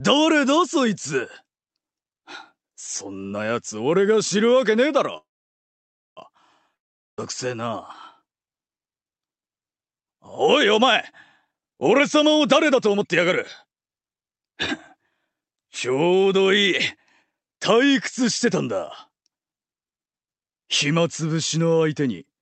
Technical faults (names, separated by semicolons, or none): call audio freeze; long network dropout; jitter buffer speed-up